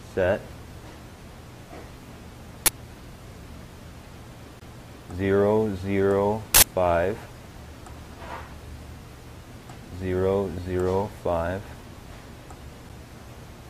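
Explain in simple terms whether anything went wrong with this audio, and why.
Yes, two kinds of fault can be heard.

At 2.66 to 2.68 s and again at 6.55 to 6.63 s there is a sudden loud crack or burst of noise. This is an uninitialised buffer: the player sent out a block of memory before any real audio had been written into it, so leftover data played as sound. The bursts last about 20 ms and 80 ms, which fits whole blocks being played. What sets it apart from a skip is that you hear loud, unrelated noise, not a gap.

At 4.60 s and 12.89 s the sound ticks, goes briefly silent, and then carries on from a different point. This is a CD skip: the laser jumped to another turn of the disc and the player muted for a moment while it recovered. The silences are very short, only about 15 and 7 thousandths of a second. Unlike the buffer fault, nothing loud or strange is added. The sound simply drops out for an instant and then jumps to another place.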